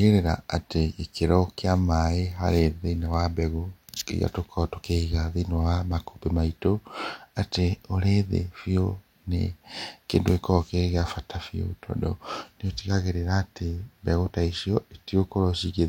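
Nothing in the technical state of this speech recording points to a fault anywhere in the signal.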